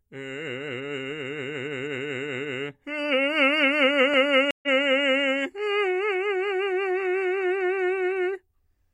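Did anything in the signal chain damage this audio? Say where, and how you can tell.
Yes. A stream reconnect at the network stage: music stops at 4.51 s, about 120 ms of silence, then resumes roughly 150 ms further on by 4.68 s, skipping material rather than just dropping out.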